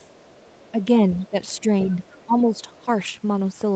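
From 0.0 to 0.83 s, and again from 1.16 to 2.8 s, the other side's voice leaks through. A second voice sits faint beneath the speech, about 35 dB down at first and about 30 dB down later. The loudspeaker echo was likely not fully cancelled.

Speech is suppressed in double talk at 0.72 to 0.77 s. The main voice dips by about 5 dB. From 1.3 to 2.44 s it drops harder, by up to about 15 dB, for roughly 0.4 s in all. The echo canceller likely turned the talker down with the echo.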